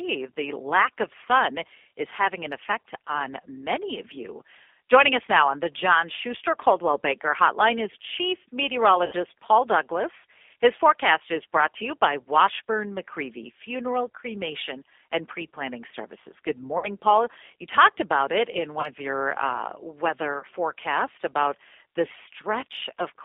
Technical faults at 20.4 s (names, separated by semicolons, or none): G.729 codec; VoIP packet loss concealed by the speech codec